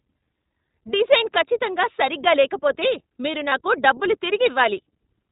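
The whole speech clip passes through the iLBC codec, and the damage is plainly audible. Nothing above 4 kHz survives, so the sound is narrowband and dull at the top. Each 20 ms frame has its excitation coded on its own. The result is clear but rough and slightly synthetic. The texture fits iLBC running at 15.2 kbps.

At 3.50 to 3.53 s there are lost iLBC frames. About 20 ms of audio went missing. The decoder filled the gap by repeating the last pitch cycle with some noise mixed in. It sounds like a brief held vowel with a faint buzzy, breathy edge. Because iLBC frames stand alone, the speech is clean again straight after the gap.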